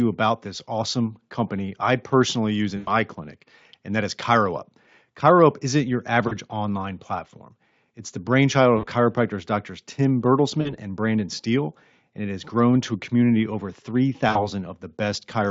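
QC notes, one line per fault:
2.77–2.91 s, 6.27–6.33 s, 8.77–8.85 s, 10.61–10.76 s, 14.29–14.48 s, VoIP packet loss concealed by the speech codec: the decoder bridges 40 to 100 ms holes by stretching the last sound into a fading buzz. The worst is after "company I personally use", and each one stays weak briefly after recovery.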